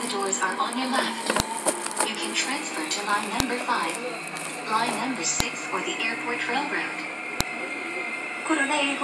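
Sharp clicks land at 1.40, 3.40, 5.40 and 7.41 s, every two seconds. This is a file header played as audio. Leftover header bytes at each joined piece snap loudly.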